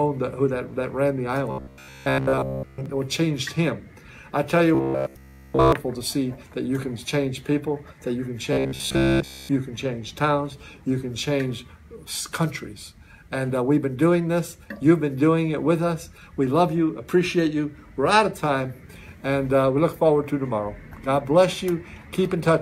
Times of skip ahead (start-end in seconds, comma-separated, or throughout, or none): none